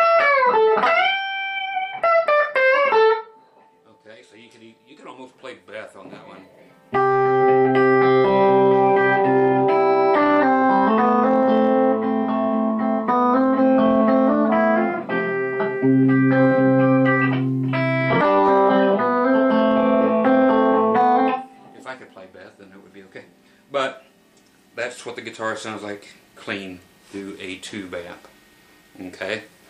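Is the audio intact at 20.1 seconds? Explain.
Yes, the audio at 20.1 seconds is intact, with no dropout, click, distortion or other fault at that moment.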